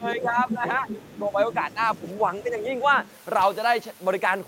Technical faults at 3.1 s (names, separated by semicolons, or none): other side's voice leaking through